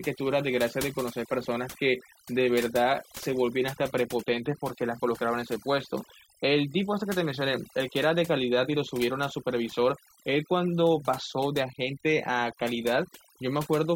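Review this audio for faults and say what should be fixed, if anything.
Overdone noise removal runs from start to finish: the noise reduction stage was set far too aggressively, so any frequency band that sits close to its noise estimate gets pulled down hard or switched off entirely, and the quieter components of the speech are removed along with the noise. The result is a background that collapses into near silence dotted with twinkling specks. Reduce the noise reduction amount, or capture a cleaner recording at the source, so that only the true noise floor is attenuated.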